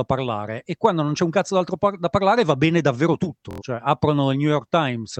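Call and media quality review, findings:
Bluetooth stutter, 3.51 to 3.62 s, right after "parlare va bene davvero". Short slice replayed as a machine-gun buzz while packets were late or lost; speech resumes further on, about 93 ms missing, consistent with roughly four dropped frames. Component: BT link/receiver buffer.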